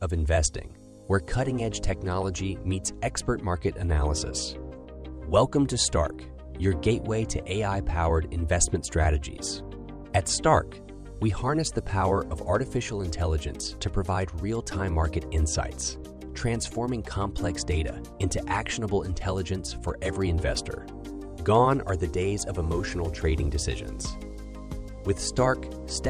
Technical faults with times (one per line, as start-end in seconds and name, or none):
none